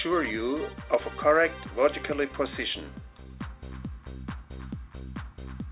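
No technical faults can be heard anywhere.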